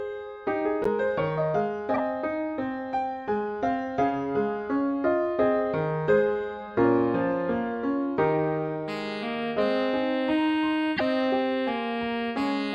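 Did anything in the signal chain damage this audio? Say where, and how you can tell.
Yes. Throughout, the sound is watery and swirly. Weak detail flickers in and out. That points to the codec stage, likely MP3 compression at a low bitrate, around 64 kbps. The encoder dropped quiet frequency lines.

Three short bursts come from the decoder. They fall at 0.84 to 0.87 s, 1.94 to 2.00 s and 10.96 to 11.01 s. Each is a chirp or blip; the first two peak near about -15 dBFS, and the last near about -10 dBFS. These are corrupt frames that were decoded anyway. Each burst spans only a few frames. The flipped bits put energy at the wrong frequencies.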